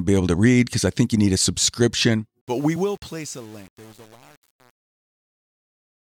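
Speech with a fade-out from around 2.4 s to 6.03 s, and from 2.41 s on it shows truncation distortion on the fade. The stage is keeping too few bits with no dither, which sounds like roughly 7 bits, so the tail turns gritty.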